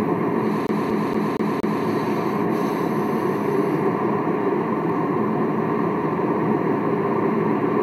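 A recording of sounds that catches from 0.67 to 1.84 s, where the same short fragment of about 0.23 s plays five times in a row, with a brief mute at each jump, giving a rapid, perfectly even stutter. This is a CD stuck on one turn: a scratch knocks the laser back one track at the same point on every rotation, so the player keeps rereading the same stretch before it breaks free.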